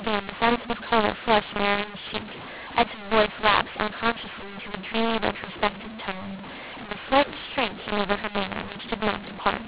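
Throughout the speech, mu-law and A-law are mixed up: mu-law telephone samples decoded as A-law scramble levels, giving harsh distortion and lifting pauses into audible noise.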